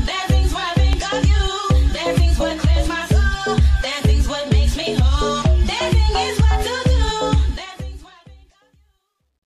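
At 0.93 to 0.95 s a loud pop jumps out, around 10 dB above the surrounding sound. It is a single sharp hit, and the sound carries on beneath it. A sudden voltage step entered the signal path, and the circuits after it shaped the step into a brief pulse. Its likely source is a plug being seated, a switch being thrown, a static discharge or a driver glitch.

From 7.33 s to the end there is truncation distortion on a fade. But the digital level stage drops low bits without dither, which fits a 12-bit stage. As the level shrinks, the waveform collapses into a few coarse steps. The tail turns gritty. It is worst from 8.44 s to the end.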